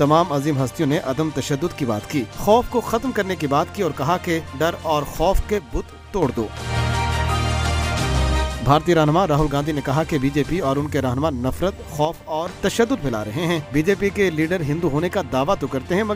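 Audio with the level falling abruptly by about 6 dB from 5.58 to 6.22 s and 12.05 to 12.46 s, seen as stepped-down waveform blocks, likely one channel dropping out.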